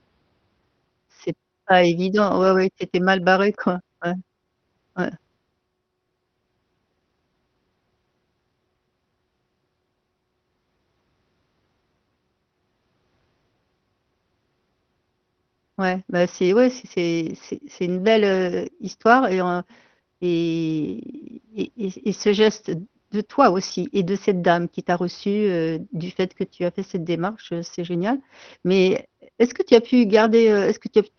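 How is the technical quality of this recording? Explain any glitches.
No glitches or dropouts are audible in this speech.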